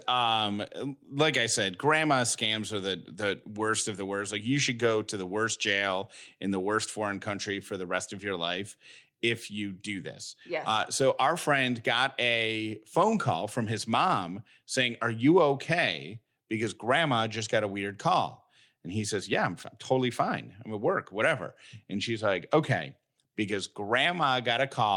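No technical faults can be heard anywhere in the recording.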